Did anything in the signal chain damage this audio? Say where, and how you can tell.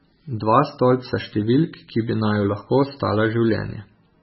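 Yes, at the codec stage, likely MP3 compression. The damage runs through the whole speech clip. Nothing reaches above 5.6 kHz, so the treble ends at a hard wall. Weak frequency lines drop in and out between frames, giving heavy watery swirl that fits a very low bitrate near 16 kbps.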